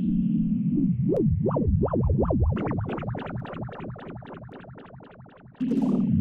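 Clock drift buffer slips run from 1.17 s to 5.64 s: about five regular clicks, one every 1.12 s. Two independent clocks likely disagree by around 150 parts per million, so a few samples are periodically dropped or repeated, ticking through the sound.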